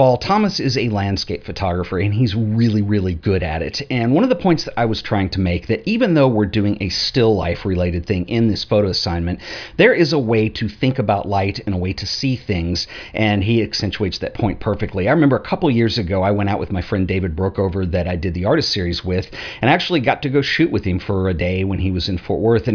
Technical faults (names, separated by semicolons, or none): none